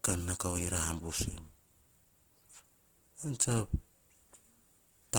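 Throughout, the speech sounds rough, grainy and noisy, yet reaches 20.2 kHz: likely Opus compression, filling starved bands with noise at a bitrate fitting 16 kbps.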